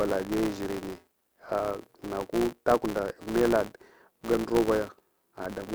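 A filter in the chain is restarted on every block, dropping its state and starting each block from silence, so this speech clip carries a steady buzz at about 172 Hz, which fits a 256-sample block, throughout. The buzz rises and falls with the speech level.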